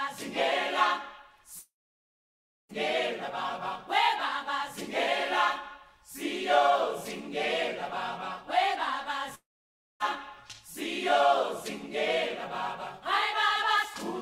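At 1.59 s the sound breaks off into a brief fading buzz, then about a second of silence until 2.71 s. The same happens from 9.35 to 10.02 s, with roughly 0.58 s of silence. Both gaps are likely a long network dropout: audio stopped arriving, the receiver briefly stretched the last sound, and playback resumed with that stretch lost. On a spectrogram each shows a smeared, decaying band followed by a blank column. On the waveform it looks like a tapering tail into a flat line.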